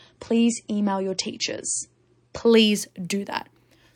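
From 0.0 to 2.5 s, an adaptive stream starting at a low bitrate leaves the speech dull and smeared with nothing above 9.5 kHz, then clarity returns suddenly, without any gap.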